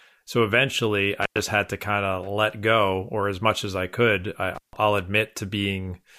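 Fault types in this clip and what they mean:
Intermittent contact: a loose connection opens, cutting the speech for about 97 ms at 1.22 s, just before "had to kind of", and 150 ms at 4.55 s, after "as I could I". Crackle at each edge and faint hiss inside distinguish it from a clean digital dropout.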